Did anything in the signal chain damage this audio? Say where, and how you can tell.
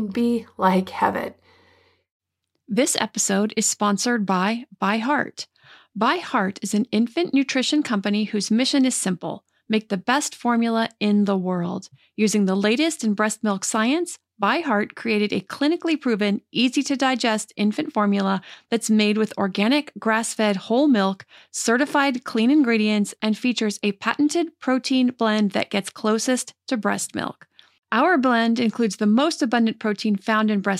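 Yes. At 18.54 to 18.64 s, right after "to digest infant formula", the level dips abruptly by about 6 dB for roughly a tenth of a second, then snaps back before "that's made with organic". That's one channel dropping out, likely a loose connector in the analogue wiring: half the mono sum vanishes briefly.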